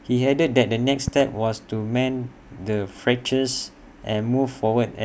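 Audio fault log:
1.08–1.23 s loud pop: a sudden voltage step, likely from a plug, switch, static discharge or driver glitch, enters the chain and is shaped by the circuits after it, giving two sharp pops about 15 dB above the speech, which carries on underneath.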